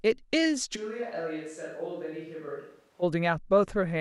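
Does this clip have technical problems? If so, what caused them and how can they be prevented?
Yes. A switch to a distant microphone runs from 0.78 to 3.01 s. At 0.78 s the speech turns suddenly roomy and hollow, loses low end and drops roughly 10 dB in level, while background noise rises to sit around 30 dB below the speech. It snaps back just as abruptly at 3.01 s. The likely cause is that the close microphone's signal dropped out and the recording fell back on a more distant pickup, such as a camera microphone. To prevent it, secure the close microphone's cable or wireless link and monitor it on headphones during recording.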